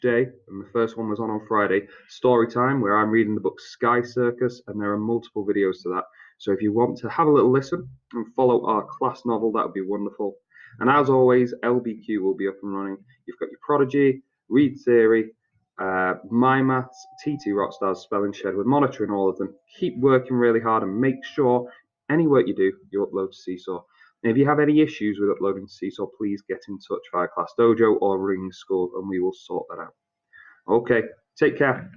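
No faults are audible anywhere in this audio.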